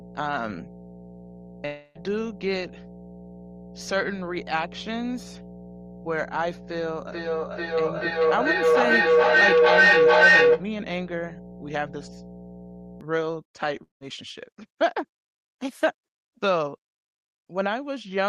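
From the start until 13.01 s, mains hum runs under the speech: a steady 60 Hz tone with low harmonics, sitting roughly 10 dB below the speech level. It points to a ground loop or a nearby transformer leaking power-line current into the signal path.

At 1.65 to 1.97 s, and again at 13.83 to 14.03 s, there are long network dropouts, likely from packets failing to arrive. In the first gap, a fading buzz stretches the last sound across nearly the whole 0.3 s. In the second, the fill decays quickly into near-silence before the audio resumes further on, with the lost section absent.

From 7.12 to 10.74 s, a feedback echo between two devices appears. Each utterance returns about every 0.4 s, growing thinner and more ringing. Because the loop peaks at about 11 dB above the direct speech, the repeats stack up instead of dying away. The echo canceller on each device only removes its own playback, so the other device's output keeps cycling.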